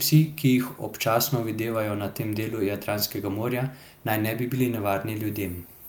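No technical faults can be heard anywhere in the recording.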